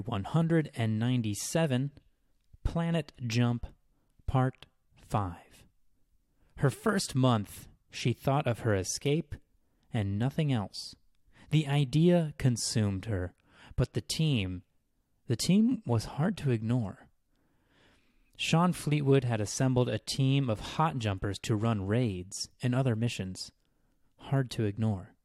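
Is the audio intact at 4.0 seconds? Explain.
Yes, at 4.0 seconds the speech plays through intact, with no audible fault at that moment.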